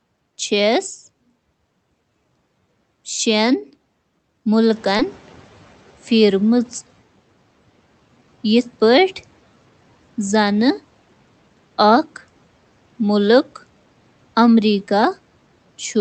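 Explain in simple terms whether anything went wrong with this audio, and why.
Two things went wrong, both right after the background noise in the room suddenly gets louder, around 4.5 s.

The first is the noise suppressor catching up. The noise-removal stage works from a running estimate of how much background noise to take out, and that estimate was still set for the quieter room. From 4.73 s the louder noise comes through with little reduction, then fades down over roughly two and a quarter seconds until about 6.99 s, once the suppressor has adjusted. A room that simply got noisier would stay loud, but here the noise gradually sinks by itself.

The second is a short concealed packet loss, from 4.97 to 5.01 s. About 20 ms of the call arrived too late to be played. The receiver covered the gap by extending the sound that came just before it for about 14 ms, then blended back into the real audio. 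It comes across as a tiny smear or wobble rather than a silent gap or a sharp click, and it lasts only a few hundredths of a second.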